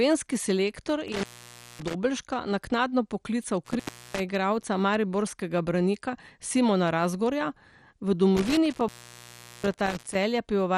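Speech runs through the whole clip with a dull, gurgling, granular texture and nothing above 14.3 kHz. This is likely MP2 compression at a low rate, around 64 kbps. A spectrogram would show a flat ceiling at 14.3 kHz with upper bands flickering on and off. Three intermittent contact faults break in between 1.08 and 1.94 s, 3.65 and 4.30 s, and 8.37 and 10.15 s. The sound drops out for about 0.56 s, 0.35 s and 0.75 s, with crackle at each edge. On the waveform these appear as near-flat gaps flanked by sharp spikes.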